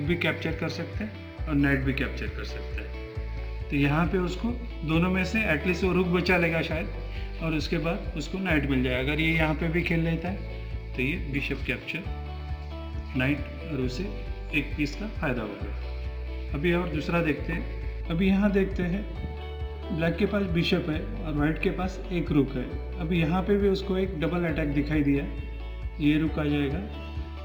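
Sample clock jitter runs through the whole recording. The converter's timing wanders by a few microseconds, so each sample lands slightly off its intended instant, and the resulting amplitude error scales with how fast the waveform is changing. The effect is a grainy hiss riding on the signal, roughly 35 dB below it, that thickens on loud and bright passages and drops away entirely when the audio goes quiet.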